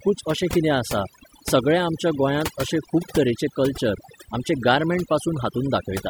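Overdone noise removal runs from start to finish: the noise reduction was set too aggressively, cutting individual frequency bands whenever they sat near its noise estimate and taking softer parts of the speech with them. The background drops and breaks up into twinkling specks.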